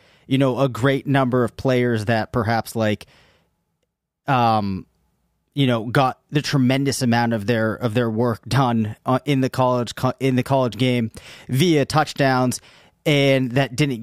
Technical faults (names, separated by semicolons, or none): none